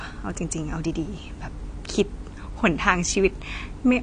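Throughout, the speech sounds dull and smeared, with nothing above about 9.6 kHz and a warbling, fizzy texture on sibilants. This is likely AAC compression at a low rate, consistent with AAC-LC near 32 kbps, lowering the cut-off and coarsely quantising bands.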